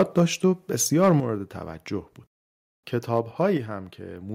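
From the very start, 0.0 to 0.21 s, the loudest speech carries a harsh, crackling edge. Microphone overload is the likely cause, with the input driven about 4 dB past the converter's ceiling so the peak tops are sliced flat. It returns from 1.03 to 1.13 s at about 3 dB over, and there a few percent of the samples are clipped. A limiter would round those peaks off. Flat-topped clipping instead produces this gritty, buzzing distortion.

At 1.2 s, just after that second distorted burst, the voice and the background both drop by about 7 dB at once. That is likely the microphone volume being stepped down by the call software in response to the clipping. A second drop of about 5 dB comes at 3.57 s. Each change is a single abrupt step with no glide, which separates it from gradual automatic gain riding or a fade, and it lowers the room tone as well as the speech.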